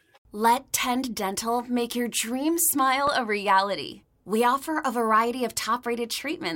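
A loud pop hits this speech clip at 3.07 to 3.10 s, between "make your dream" and "a reality": a single sharp click peaking roughly 10 dB above the speech, which continues underneath. It is likely a voltage spike from a switch, plug, static discharge or driver glitch.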